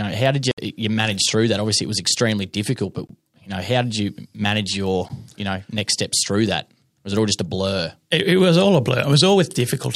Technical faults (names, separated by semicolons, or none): block of digital silence